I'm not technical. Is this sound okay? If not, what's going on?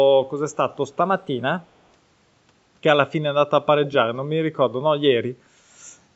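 No. Drift correction step, 1.01 to 1.59 s: the speech briefly runs about 6% fast and a semitone sharp, then snaps back, likely clock-matching software adjusting speed.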